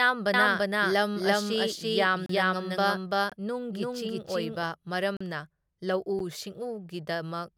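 From 0.34 s to 4.63 s the speech carries a doubled audio track: a second, full-band copy trails the original by roughly 300 ms at about the same level. It has no decay or room colour, and it switches in and out abruptly at those times. The likely cause is the same signal being captured again through a slower path, or an edit leaving two copies out of step.

Four blocks of digital silence cut into the signal at 2.26 to 2.29 s (32 ms), 3.30 to 3.32 s (21 ms), 5.17 to 5.21 s (38 ms), and 6.19 s (11 ms). Each cuts out and back with no fade. The longer ones sound like short holes and the 6.19 s one like a tick. The 21 ms and 11 ms lengths fit buffers of 1024 and 512 samples at 48 kHz, which points to output buffers that were not filled in time.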